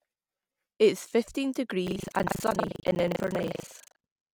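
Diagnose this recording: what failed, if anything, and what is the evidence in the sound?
From 1.84 s to the end, the speech takes on a robotic, rattling buzz at 25 Hz that persists only while there is signal. This is buffer tearing at the driver or buffer stage. The application's writes and the hardware's reads have drifted until they cross within every 40 ms period. About a third of each period replays speech from roughly a tenth of a second earlier, and the hard joins at both edges produce the rattle.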